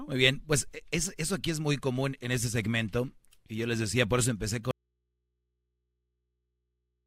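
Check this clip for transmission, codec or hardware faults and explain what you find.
One fault: an audio dropout to a faint residue at 4.71 s, just after "decía por eso empecé", lasting to the end. The feed was likely lost while the input stayed live, so the speech cuts off abruptly, leaving only mains hum roughly 50 dB below the signal.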